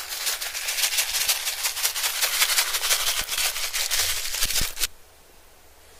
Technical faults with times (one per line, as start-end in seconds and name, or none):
1.11-1.28 frames out of order
3.21-3.40 frames out of order
4.45-4.65 frames out of order